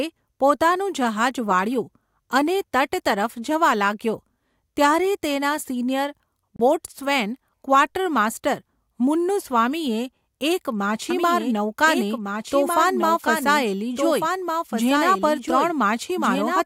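At 6.56 s the speech drops to dead silence for 30 ms, ending at 6.60 s, then carries on from where it left off. That gap is a Bluetooth stall, likely caused by radio interference delaying packets long enough for the headphones' buffer to empty, so playback halted briefly until the resent data arrived and the stream could resume.

From 11.10 s to the end, a second copy of the speech runs alongside the first, trailing by about one and a half seconds and sitting roughly 5 dB lower. It cuts in abruptly, with no fade, and carries no reverberant tail or room colour, just the same full-band sound offset in time. This doubled audio track likely comes from the signal being captured twice, once through a slower path, so the delayed duplicate gets mixed back in on top of the original.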